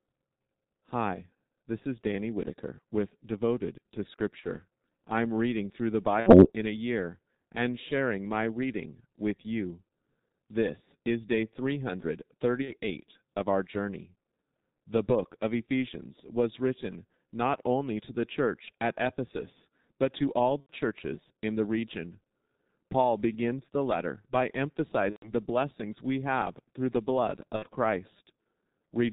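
Throughout, the G.723.1 codec at 6.3 kbit/s leaves speech muffled and hoarse, and the spectrogram is empty above 4 kHz with smeared consonants. VoIP packet loss concealed by the speech codec occurs at 4.40–4.44, 6.20–6.51, 12.62–12.75, 20.61–20.72, 25.10–25.33 and 27.56–27.67 s. During each gap the decoder extends the last pitch and filter into a fading buzzy tone or coloured noise. The gaps fit one to four lost 30 ms frames.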